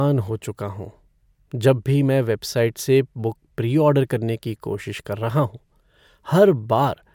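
No technical faults can be heard in the speech.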